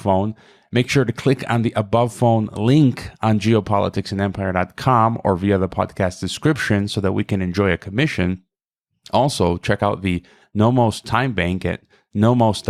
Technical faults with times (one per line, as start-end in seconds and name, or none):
none